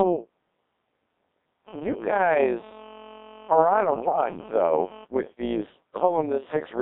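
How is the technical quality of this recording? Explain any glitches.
The technical quality is poor: heavy vocoder coding, a constant frame-rate ripple, and one short burst of corruption.

Throughout, the speech has passed through a Codec 2 vocoder at a very low rate, which fits about 1.3 kbit/s. Only pitch, voicing, energy and a coarse spectral envelope survive, and sine-wave resynthesis replaces the real waveform. The result is a robotic, buzzy voice confined to roughly 200 Hz to 3.7 kHz.

Also throughout, there is overlap-add ripple. Frames were reassembled with overlapping windows that don't sum to a steady gain, so the level swings by about 6 dB once per frame, around 150 times a second. This adds a metallic buzz with extra tones over the voice.

From 3.93 to 4.16 s there is a burst of bit errors on digital voice radio, at a bit error rate of around 7 percent, which points to about five corrupted frames. 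Flipped bits scramble each frame's pitch, level and spectral settings, so the voice warbles and jumps into brief robotic gibberish.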